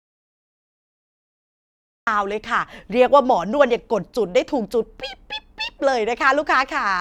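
An audio dropout to silence occupies the opening of the clip, from 0.0 s to 2.07 s; the silence is already under way when the recording begins, and the speech enters mid-flow once it ends. The gap is silent with no room tone, pointing to an input that was likely lost to a disconnected device, broken link or accidental mute while the recorder kept writing silence. Whatever was spoken during that stretch is absent.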